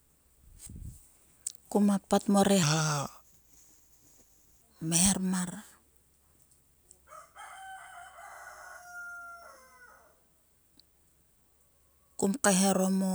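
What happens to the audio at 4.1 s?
At 4.1 s the speech sounds deep and dragging, about four semitones low, because a section at the wrong speed runs from 2.63 to 4.61 s, between "kuma pat mo" and "kmeher mar". It plays at 0.815 times normal speed, likely from being resampled to the wrong clock.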